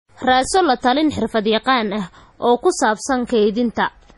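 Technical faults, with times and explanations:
Throughout, MP3 compression: the speech sounds watery and swirly, with smeared consonant attacks. This is likely heavy MP3 encoding at a low bitrate, which fits 32 kbps. On a spectrogram there is a flat ceiling at 11.4 kHz, with faint detail flickering between frames.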